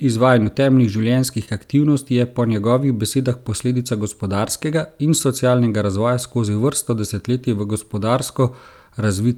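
Speech with short concealed packet loss at 0.43 and 1.45 s, just before "aktivnosti je po njegovih". About 20 ms went missing each time. The receiver continued the sound, leaving brief smears.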